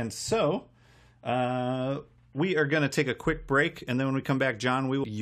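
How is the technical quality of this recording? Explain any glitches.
The recording has one glitch, near the very end. At 5.03 s there is damaged data in the compressed stream. Some of the data is wrong there, so the decoder misreads that frame and loses sync. It hunts for the next valid frame header. The result is a brief glitch lasting about 15 ms.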